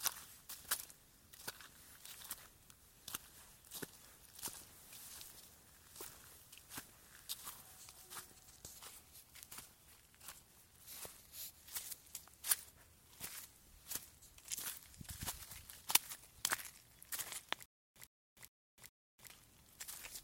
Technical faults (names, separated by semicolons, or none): stutter with silent gaps